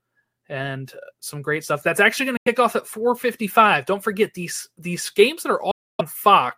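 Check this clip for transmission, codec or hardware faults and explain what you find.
The speech has two gaps with the profile of a Bluetooth dropout. The first runs from 2.37 to 2.48 s, just before "off at". The second runs from 5.71 to 6.01 s, just after "these these games that". The likely cause is audio packets arriving too late at the headphones and being discarded, so playback falls silent and then resumes mid-stream, as though the sound had kept going. On the waveform and spectrogram, each appears as a fully blank vertical band, about 90 ms wide and about 280 ms wide respectively.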